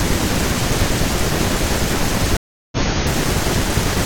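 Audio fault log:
2.37–2.77 s, stream reconnect: the speech cuts to silence for about 0.35 s, then picks up again at a later point in the stream, skipping roughly a third of a second of material. This is the player losing its connection, rejoining and starting a new decoder mid-stream. Because the source kept running during the gap, playback lands further ahead rather than where it stopped, and the first frame after the restart fades in.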